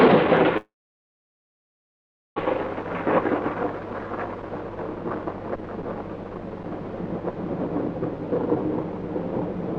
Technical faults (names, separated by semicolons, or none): call audio freeze